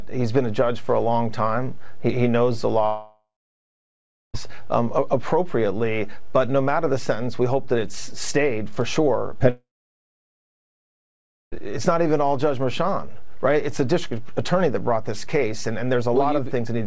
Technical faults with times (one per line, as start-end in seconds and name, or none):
2.86-4.36 long network dropout
9.34-9.42 short concealed packet loss
9.50-11.54 long network dropout